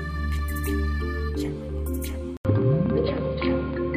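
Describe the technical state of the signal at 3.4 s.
At 3.4 s the signal sits inside a stretch that starts at 2.37 s and runs to the end. The band stops near 4.9 kHz, so the sound is dull and boxy. A short gap of about 80 ms marks the change at 2.37 s. A new noise floor appears, roughly 55 dB below the signal. The level stays about the same. This is likely an input switched to a poorer device, with a narrower band and its own noise.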